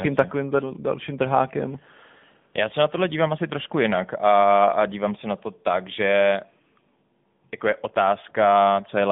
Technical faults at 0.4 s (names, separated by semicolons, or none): AMR narrowband mobile codec